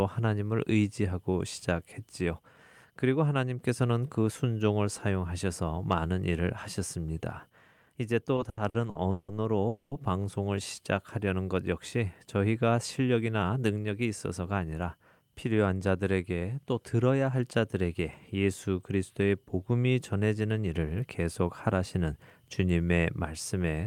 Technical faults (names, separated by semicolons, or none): repeated stalls (stutter); call audio freeze; jitter buffer speed-up